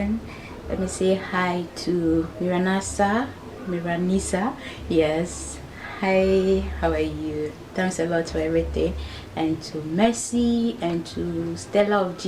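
Nothing in the audio stood out as a technical problem on listening.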